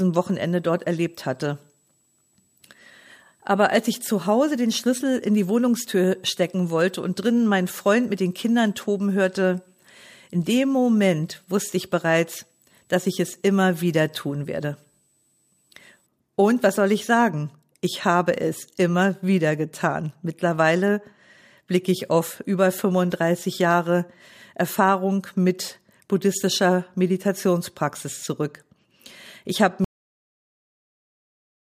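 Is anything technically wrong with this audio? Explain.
Yes, two faults are audible. From 0.0 to 16.06 s there is a switching supply whistle. A switching power supply is cycling in an audible burst mode or beating with another supply, which leaks a high whistle into the speech. It wanders between about 7.7 and 8.1 kHz, sitting roughly 35 dB below the speech. At 29.84 s comes a cut-off end. The final buffers were never written out, so the speech is chopped mid-sound and falls straight to digital silence with no natural decay, staying silent for the remaining stretch of the clip.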